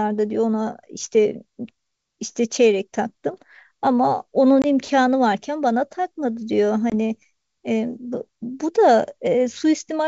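At 4.62 to 4.66 s and again at 6.90 to 6.94 s, packet loss on an ADPCM call cuts a hard-edged 20 ms hole, about one packet each. Unlike a clean dropout, the speech comes back slightly distorted while the decoder's predictor and step size regain sync over some tens of milliseconds.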